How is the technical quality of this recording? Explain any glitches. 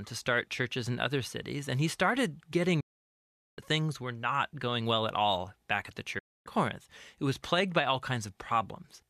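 The speech twice drops into near-instant silence, with a fade of about 8 ms, and then resumes further on. The first hole runs from 2.80 to 3.59 s, about 0.77 s, and the second from 6.19 to 6.47 s, about 0.28 s. Both are a digital broadcast dropout. The receiver stopped getting decodable frames, likely from a lost signal or failed checksums. It muted its output until valid frames arrived again, so everything sent during those gaps is missing.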